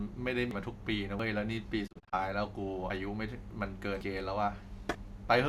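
Dropped buffer (overrun) at 0.51 s: the speech jumps ahead, skipping roughly 150 ms, likely because samples were overwritten before the program collected them. The same skip recurs at 1.20 s, 2.90 s and 4.01 s, each losing about a tenth of a second. Digital broadcast dropout from 1.86 to 2.14 s: the receiver muted on failed frames, so the sound fades out over about 20 ms into several short holes. The holes total 120 ms across 240 ms, none longer than 24 ms.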